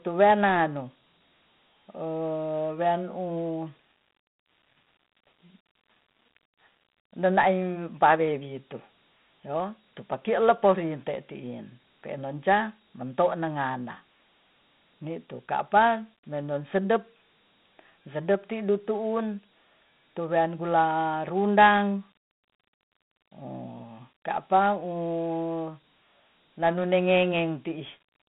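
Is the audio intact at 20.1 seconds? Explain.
No. At 20.1 seconds, as everywhere in this speech, a gritty hiss rides on the voice, which sounds thin and boxed in: nothing above about 3.9 kHz, and the band runs roughly 150 Hz to 3.7 kHz like a phone line. This is Dialogic VOX ADPCM throughout. Each sample is coded as a 4-bit step relative to the last, which fits a 32 kbps stream at 8,000 samples a second. That coarse stepping leaves plainly audible grainy noise tracking the speech.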